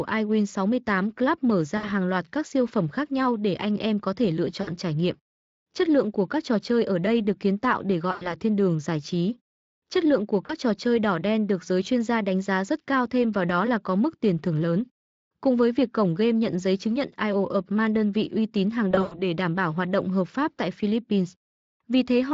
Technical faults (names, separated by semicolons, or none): VoIP packet loss concealed by the speech codec